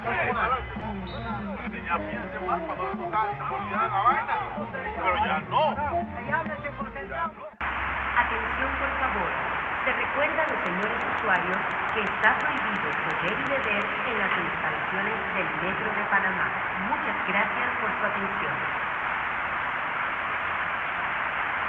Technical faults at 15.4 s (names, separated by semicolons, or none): none